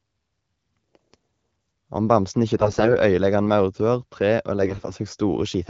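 From 2.56 to 2.96 s and again from 4.62 to 4.93 s, AMR bit errors make the speech hoarse and gargly: misplaced excitation pulses and corrupted spectrum values smear formants into scratchy, noise-filled spectrogram patches.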